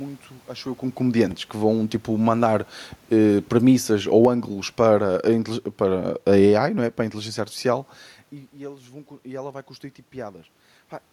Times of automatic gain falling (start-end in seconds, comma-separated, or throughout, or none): 3.53-7.06